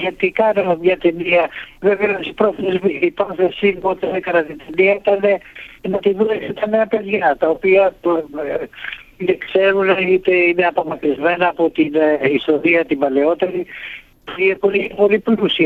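No dropouts, distortion, glitches or other technical faults can be heard anywhere in the recording.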